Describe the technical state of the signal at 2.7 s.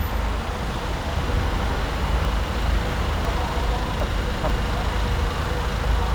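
At 2.7 s the audio falls within a chunks-out-of-order span from 2.25 to 3.25 s: one 250 ms chunk plays three chunks late, giving a jumbled moment. Waveform and spectrogram show three abrupt discontinuities.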